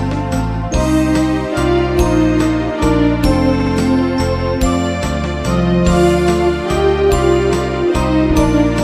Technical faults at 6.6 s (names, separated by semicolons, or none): none